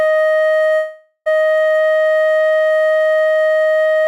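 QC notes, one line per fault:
0.75–1.28 s, long network dropout: the music stops arriving for about half a second. The receiver stretches the last sound into a fading buzz or hiss that fills nearly the whole gap, then leaves about 70 ms of silence before the music resumes at 1.28 s. Roughly 500 ms of the passage is never heard. This smeared fade followed by a hole is what packet-loss concealment does when data stops coming, so a network interruption is the likely cause.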